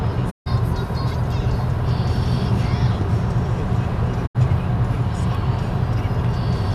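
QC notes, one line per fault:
0.29–0.48 s, digital broadcast dropout: the sound fades to silence over about 20 ms, leaves a hole of about 144 ms, then picks up later in the stream rather than where it stopped. The receiver lost the signal or rejected frames that failed their checksum and muted until clean frames returned. The gap fits six lost frames, and whatever was transmitted during it is gone.
4.25–4.37 s, digital broadcast dropout: the same quick 20 ms fade leads into a shorter hole of about 72 ms, which fits three lost frames. The mute lifts as soon as valid frames arrive, so the sound resumes mid-flow with the missing stretch simply skipped.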